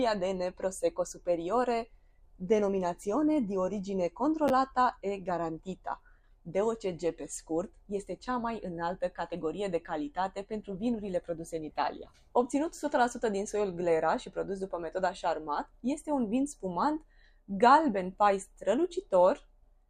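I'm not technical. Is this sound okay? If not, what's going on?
No. At 4.48 to 4.50 seconds, chunks were out of order: one 10-millisecond slice of sound arrived a step late and played after the slice meant to follow it. Nothing is missing, but the swap leaves a tiny jumbled blip.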